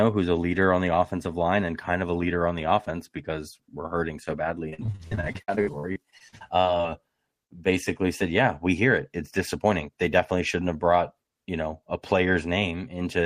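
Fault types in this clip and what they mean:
repeated packet loss (robotic sound): Packets kept going missing from 4.69 to 6.91 s, right after "we're hurting so badly", and each hole was patched by stretching the previous sound. Around twenty gaps, the longest 58 ms, leave the speech choppy and robotic.
jitter buffer speed-up: Audio had piled up in the receiver's jitter buffer, so it trimmed short pitch-period pieces, about 70 ms in total, between 9.64 and 10.06 s, just before "definitely shouldn't have brought". The speech runs at 112% speed and sounds hurried, with its pitch unchanged.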